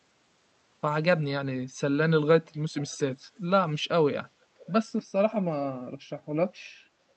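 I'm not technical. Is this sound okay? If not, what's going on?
No. There is an echo leak: at 2.76–2.97 s and again at 4.58–4.73 s, a faint, delayed copy of the speech returns about 0.43 s late, the second time even quieter. It is likely a loudspeaker on the other end being picked up again. Unlike room reverberation, it is a separate repeat, not a smeared tail.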